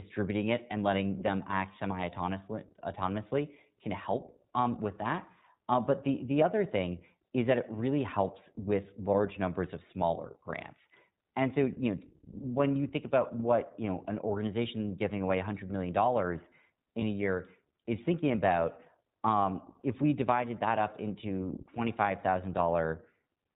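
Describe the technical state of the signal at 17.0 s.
A brief held, slightly buzzy vowel-like sound runs from 17.00 to 17.03 s, about 20 ms, which fits a single lost frame. These are lost iLBC frames: the decoder filled the gap by repeating the last pitch cycle mixed with noise, and the speech recovers immediately because each iLBC frame is decoded independently.

Underneath, the speech is band-limited, with nothing above 4 kHz, and sounds plainly rough and synthetic. That is the iLBC codec, coding each 20 ms frame's excitation on its own, which fits its 15.2 kbps mode.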